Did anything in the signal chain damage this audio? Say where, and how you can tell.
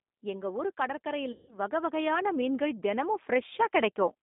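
Yes. The codec stage damaged the whole clip. This speech sits in a band of roughly 200 Hz to 3.6 kHz with nothing above it, and it sounds rough and slightly synthetic, which points to G.729 (likely the G.729A variant) at 8 kbit/s. The decoder rebuilds each frame from a vocal-tract filter, a pitch predictor and a few pulses. Plain telephone band-limiting would be dull but still natural. This sounds resynthesised.

Call processing applied automatic gain, and it kept rising from 0.21 s to 4.18 s, lifting the level by about 10 dB. The AGC judged the input too quiet and raised its gain slowly. Voice and background swell together over several seconds, with no pumping back down between phrases. That steady climb sets it apart from a compressor, which would duck and recover with each syllable.

The network lost packets, and the speech codec concealed the loss from 1.32 s to 1.59 s. About 160 ms of audio went missing, which fits eight 20 ms packets. 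The decoder extended the last pitch and filter into a stretched sound that fades. It stays weak for a while after real audio resumes, because each frame builds on the previous one. A simple dropout would cut to silence and snap back cleanly.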